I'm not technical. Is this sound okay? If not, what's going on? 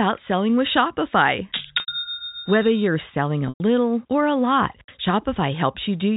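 No. There is packet loss with pitch repetition at 1.80–1.88 s and 3.49–3.60 s: the speech briefly holds a buzzy tone while the receiver repeats the last pitch period, then fades to silence within the 80 ms and 110 ms gaps.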